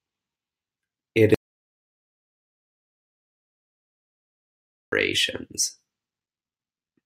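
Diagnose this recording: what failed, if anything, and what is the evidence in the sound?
An audio dropout to silence runs from 1.34 s to 4.92 s: the speech cuts off abruptly and about 3.6 s of dead digital silence follows, with no room tone, before it resumes mid-flow. The likely cause is lost input at the device or link stage while the recorder kept writing silence.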